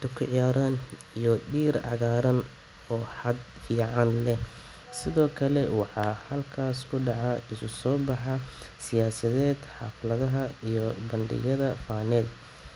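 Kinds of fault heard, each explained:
Resampler restarted on every block: the converter, consistent with 24 kHz to 48 kHz upsampling, handles each 100 ms block separately, without real neighbouring samples at block edges. The small edge errors produce steady 10 Hz ticking under the speech, heard only with signal.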